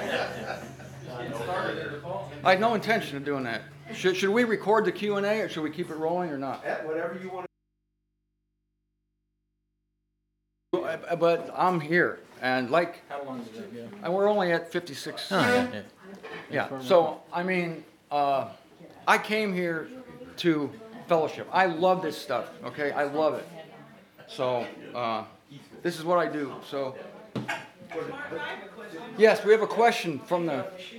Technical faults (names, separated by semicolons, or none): audio dropout to a faint residue